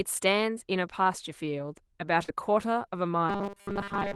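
At 2.23 s a burst of packet loss interrupts the speech. The last sound is stretched and faded for about 50 ms, then about 50 ms is skipped.

From 3.29 s to the end, the speech becomes a rigid, metallic 200 Hz buzz. The likely cause is robotic sound from repeated short buffers, with 5 ms slices replacing most of the audio.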